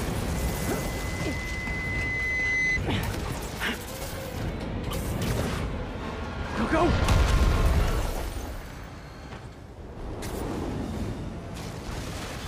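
A microphone is picking up the loudspeaker it feeds, and at 2 kHz the loop gain climbs past unity, producing loudspeaker feedback squeal. From 0.34 s a single 2 kHz tone rises out of the audio, swelling over roughly two seconds until it sits a few decibels above the rest of the sound. It then stops at 2.80 s.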